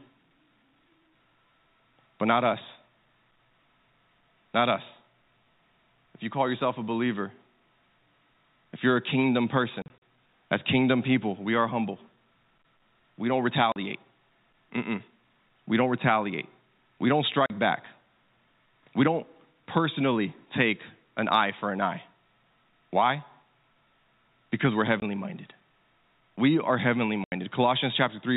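Speech with packet loss filled with silence: short dead gaps with hard edges cut into the audio at 9.82–9.98 s (after "if you're a kingdom", before "as kingdom people we", about 100 ms lost in runs up to 40 ms scattered over 200 ms), 13.72–13.76 s, 17.46–17.50 s, 25.00–25.02 s and 27.24–27.32 s (after "are heavenly"). Gap lengths step in 20 ms multiples, which fits 20 ms packets dropped in transit and replaced with silence. The narrow telephone band of the G.711 coding is audible throughout.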